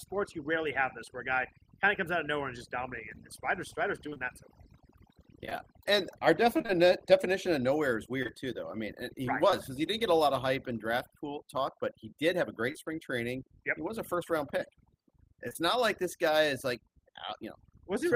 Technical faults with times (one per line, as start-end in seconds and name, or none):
0.00-18.15 overdone noise removal
4.09-4.21 repeated packet loss (robotic sound)
5.45-6.70 repeated packet loss (robotic sound)
8.22-8.31 short concealed packet loss
12.72-12.76 short concealed packet loss
15.48-15.56 short concealed packet loss